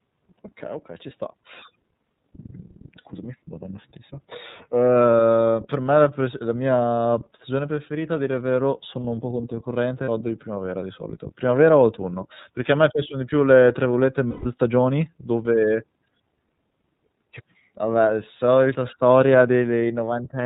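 The whole recording passes through the iLBC codec, consistent with its 13.33 kbps, 30 ms-frame mode. Nothing above 4 kHz survives, and the speech sounds plainly rough and synthetic.

At 10.04 s, right after "sono un po' controcorrente", and again from 14.31 to 14.46 s, between "più le tra virgolette" and "stagioni dove", there are lost iLBC frames. The decoder fills each gap by repeating the last pitch cycle with noise, producing a short held, buzzy vowel. The first gap is about 30 ms, which fits one lost frame. The second lasts 150 ms and fades before clean speech returns.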